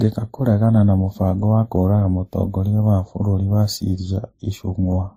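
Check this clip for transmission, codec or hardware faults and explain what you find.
The clip has one codec fault, present for its whole length: transcoding between lossy codecs. Nothing reaches above 15.6 kHz, and the speech carries several overlapping kinds of compression damage rather than one consistent signature. This is likely a low-bitrate MP3 stage, then WMA, then a final Opus encode. Each later encoder spends bits reproducing the previous one's artefacts, then adds its own. The sound is a layered roughness with a fixed top-end ceiling. A single low-bitrate encode would show only one codec's artefacts.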